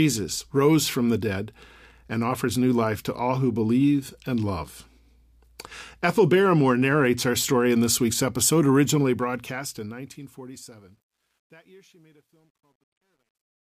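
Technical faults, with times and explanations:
8.85–13.68 s truncation distortion on a fade: after "in this week's episode", the fade-out beginning around 9 s keeps too few bits, consistent with an 11-bit word length, and no dither. The falling waveform collapses into coarse square steps, so from 10.96 s the tail turns gritty.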